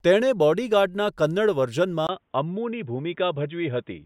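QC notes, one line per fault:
2.07–4.05 s, input switched to a poorer device: at 2.07 s the speech turns dull and boxy and stays that way to the end. This is likely a mid-recording change to a narrower-band microphone or headset call profile. On a spectrogram, everything above 3.8 kHz disappears, preceded by a 20 ms blank gap at the switch and followed by a faint new noise floor, roughly 50 dB down. On the waveform, the envelope drops by a few dB after the gap.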